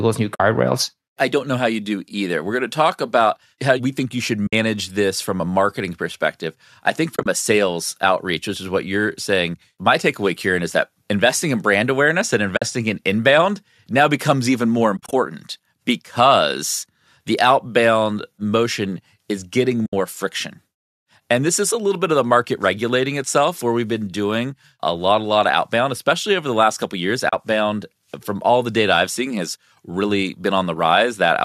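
Speech carried over what is likely low-delay AAC (AAC-ELD) compression, itself only lightly damaged, suffers AAC frame loss with muting. Lost frames had their spectrum zeroed, so the overlapping windows fade the sound out and back in, leaving soft-edged holes at 0.35 s (50 ms), 4.47 s (60 ms), 7.16 s (70 ms scattered across 100 ms, longest run about 30 ms), 12.57 s (50 ms), 14.97 s (100 ms scattered across 160 ms, longest run about 30 ms), 19.86 s (70 ms) and 27.29 s (40 ms).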